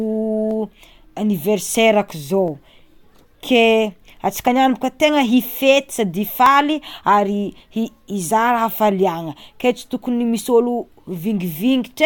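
Overlap between stream segments in this speech clip produces tiny skips at 0.51, 2.48, 4.47, 6.46 and 10.44 s. Each marks a 2-second segment boundary where overlapping timing caused a sliver of audio to be discarded.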